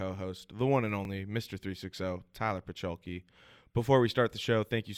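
The chunks this speech was processed in overlap, so each new chunk starts slightly before the previous one finished and a sliver of sound, about 7 ms long, plays twice at the join. These overlapping chunks show up as brief clicks or micro-stutters at 1.05 s and again at 3.06 s. The two-second spacing between them matches the 2-second chunk length, which is why the glitch recurs at such an even interval.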